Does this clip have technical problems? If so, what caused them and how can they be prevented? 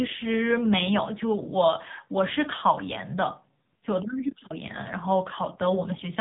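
Yes. AMR narrowband mobile codec damage runs throughout: nothing passes above about 3.8 kHz, and the speech sounds buzzy and synthetic, which points to a low mode near 6.7 kbps. A plain low-pass filter would muffle without this pulse-driven buzz. Preventing it means using a wideband codec or a higher AMR bitrate.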